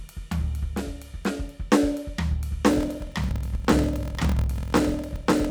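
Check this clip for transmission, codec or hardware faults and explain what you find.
One fault affects the second half of the music. A block size mismatch (padded) begins at 2.69 s and lasts to the end. Each 1024-sample block is read into a larger block, which fits 1152 samples, and the shortfall is filled with silence. That inserts a short gap every block, heard as a 41.7 Hz buzz, and the music runs at 0.889 times its normal speed while keeping about its normal pitch.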